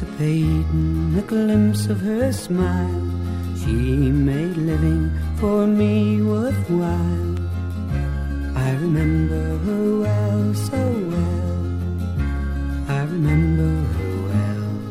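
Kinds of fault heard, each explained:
Dropped samples: A single sharp click at 10.88 s, over almost instantly, with nothing audibly missing on either side. In a spectrogram it would show as a thin vertical line crossing every frequency. The likely cause is a tiny gap in the sample stream, a fraction of a millisecond, so the waveform leaps straight from one value to a later one. That abrupt step, not any lost sound, is what makes the click.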